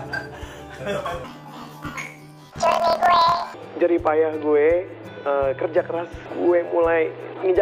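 From 1.24 to 3.55 s the sound jumps an octave high and flutters at about 38 Hz, yet keeps its normal pace. This is planar audio read as interleaved: each 26.12 ms block of left samples followed by right samples gets played twice at double speed.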